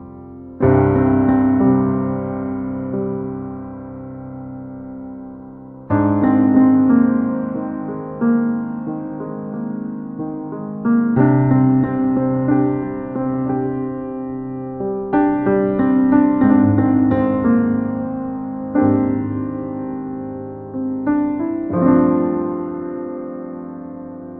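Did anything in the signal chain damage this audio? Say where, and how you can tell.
No, nothing in the chain audibly damaged this audio.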